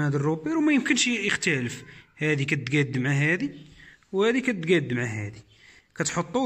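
No technical faults can be heard anywhere in the audio, and the signal holds steady throughout.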